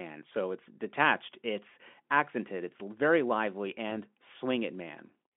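Just after "accented it's very lively", from 3.89 to 3.92 s, VoIP packet loss concealed by the speech codec fits one lost 20 ms frame: the decoder extrapolates the last pitch and filter at falling gain, giving a brief smeared, fading patch, with a dip in the waveform envelope and repeated, blurred harmonics on the spectrogram, across the Speex telephone band of 200 Hz to 3.4 kHz.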